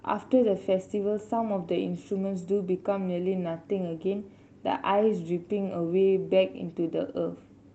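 No technical faults are audible.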